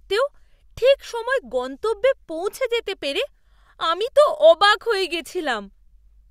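Nothing in the speech recording registers as a technical fault at any point.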